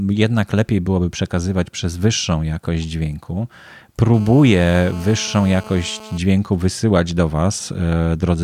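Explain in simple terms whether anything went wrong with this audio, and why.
From 4.14 to 6.18 seconds, just before "wysyłać do", a GSM phone buzz is heard. A nearby mobile phone on a call sent radio bursts 217 times a second. The audio circuit turned them into a hard, raspy 217 Hz buzz.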